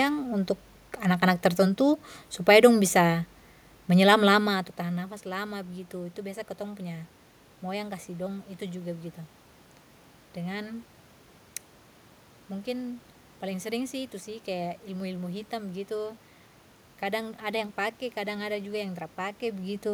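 There are no technical faults to describe in this speech recording.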